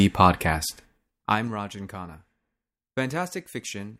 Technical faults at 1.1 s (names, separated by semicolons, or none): zipper noise